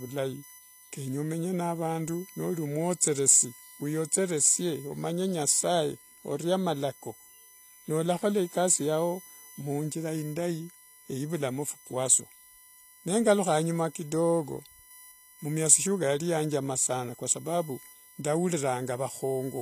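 Throughout the speech, a USB whine sits at a fixed 1 kHz and its multiples, roughly 20 dB below the signal. This is bus frame current leaking in, not 50 or 60 Hz mains hum. The treble is rebuilt and stops at 14.9 kHz, and the s sounds turn gritty, metallic or lispy. This is likely HE-AAC band replication at a low bitrate near 24 kbps, not a simple low-pass.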